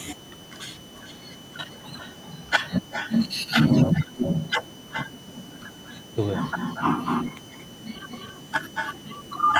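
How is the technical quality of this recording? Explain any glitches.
The recording has two problems: a steady high whistle under the whole clip, and a delayed echo of the speech through most of it.

A switching power supply somewhere in the chain is running in an audible burst mode or beating against another supply, and it puts a switching supply whistle into the audio for the full length. It sits near 3 kHz, wandering slightly between about 2.97 and 3.03 kHz, roughly 25 dB below the speech, and is heard as a thin, high whistle.

An echo leak occurs in five stretches: 0.79–1.78 s, 1.97–2.5 s, 2.81–6.16 s, 6.48–6.83 s and 7.03–9.29 s. The likely cause is a far end on a loudspeaker whose echo canceller let part of the returning speech pass back down the line. Through 2.5 s the copy trails 378 ms behind and sits about 25 dB down. From 2.81 s it rises to about 10 dB below the speech. From 6.48 s the lag shortens to 225 ms.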